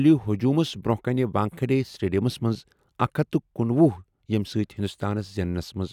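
No dropouts, clipping, glitches or other technical faults can be heard anywhere in this speech recording.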